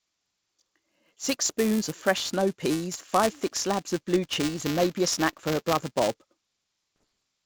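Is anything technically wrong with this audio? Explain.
Yes, two faults. The first, buffer tearing, runs through the whole speech clip. The program filling the playback ring buffer and the hardware draining it have drifted until their positions cross inside every period, so a small slice of each buffer, a few percent, still holds audio from about 5 ms earlier, with hard joins on either side. Those splices repeat at 375 Hz, which fits a 128-sample buffer, and produce a steady robotic buzz that rides on the speech and drops away in pauses.

The second fault is bit errors on an ADPCM link, with three separate events. Flipped bits corrupt the coded samples, and because ADPCM carries its step size and predictor forward, each error also knocks the decoder off track until it recovers. The first is a short pop at 1.45 s, just before "spoons of fresh snow". The longest is a rough burst from 4.49 to 4.64 s, after "thick slabs of blue" and before "and maybe a snack", with the level wavering. 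The last is a brief click at 7.01 s. The G.722 wideband coding carrying the call adds at most a faint upper-band hiss.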